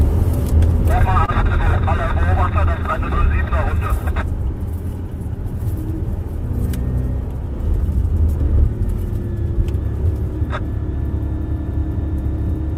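A short stall from a late packet occurs at 1.25 to 1.30 s. A packet failed to arrive on time, so the jitter buffer ran dry. The receiver bridged the gap by stretching the last stretch of sound for about 25 ms, then resumed from exactly where it had stopped. Nothing is lost, but that sound lingers too long, carrying a buzz or dip, and playback now runs about 25 ms further behind.

A jitter buffer speed-up follows at 7.35 to 8.09 s. The buffer had filled beyond its target, so the receiver trimmed it back by cutting out short pieces one or a few pitch periods long, over and over in quick succession, removing about 40 ms in total. Playback runs at 105% speed while the pitch stays unchanged, and this passage sounds hurried.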